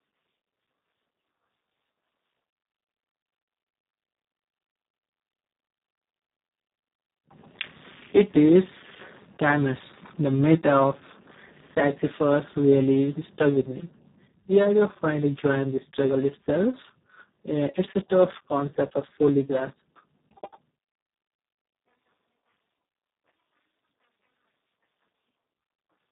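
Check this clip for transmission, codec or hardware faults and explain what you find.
One codec fault runs through the whole clip: Speex codec compression at a very low setting, consistent with a bitrate near 4 kbps. Starved of bits for its excitation signal, the CELP coder leaves the speech hoarse and noisy, with nothing above 3.8 kHz.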